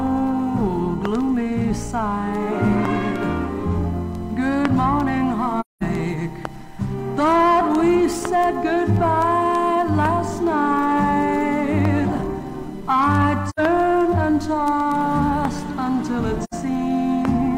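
AAC frame loss with muting occurs at 5.60 to 5.82 s, 13.50 to 13.60 s and 16.44 to 16.54 s. The decoder zeroed the missing spectrum, so the sound fades into soft-edged silences of about 213 ms, then 85 ms twice, pointing to five and two lost frames.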